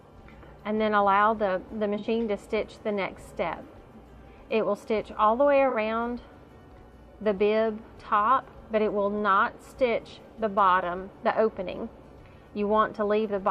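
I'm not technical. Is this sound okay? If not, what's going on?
No, there are two short damaged spots, at 1.98–2.05 s and 5.70–5.76 s. That's corrupt frame concealment: damaged chunks of data, likely about two frames each, got papered over instead of squeaking.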